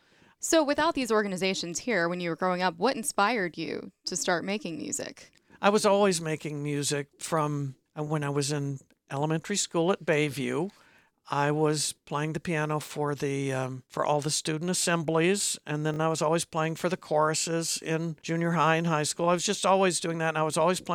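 A brief buzzy stutter at 15.94 to 15.98 s, after "student assemblies and then", is a repeated buffer: one 20 ms slice played two extra times because new audio arrived late.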